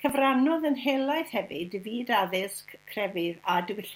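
From start to finish, something in the power or grounding path is letting sharp switching spikes from the 50 Hz supply into the signal, producing mains buzz: a steady, raspy drone of 50 Hz harmonics reaching into the kHz range, sitting well below the speech throughout.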